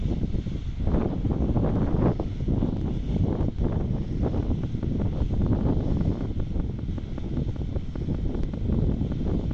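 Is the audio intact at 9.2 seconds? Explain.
No. A train of clicks runs from 4.43 to 9.52 s: around thirty near-identical pulses at a regular 5.1 per second, peaking roughly 5 dB above the signal. This is likely interference from nearby equipment or a faulty connection, heard as steady ticking over the sound.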